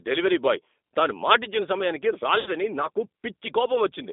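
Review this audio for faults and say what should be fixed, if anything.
Throughout the clip the speech carries G.729 codec damage: a narrow line band of roughly 250 Hz to 3.7 kHz and a plainly rough, slightly synthetic texture, which fits an 8 kbit/s G.729A stream. The coder rebuilds each 10 ms frame from a vocal tract filter, a pitch predictor and a few pulses. That explains the buzzy graininess, which a plain low-pass band limit would not produce. To prevent it, negotiate a wideband codec such as G.722 or Opus on the call path.

From 2.40 to 2.50 s there is VoIP packet loss concealed by the speech codec. About 60 ms of audio went missing, which points to two lost packets. The decoder stretched its last pitch and filter into a fading buzzy tone or coloured noise, and the sound stays weak for a little while after real packets resume. A hard dropout would cut abruptly to silence, and a click would be instantaneous. 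This fault instead smears into a decaying tone or noise before recovering. To prevent it, reduce network loss with QoS prioritisation and add forward error correction or a larger jitter buffer.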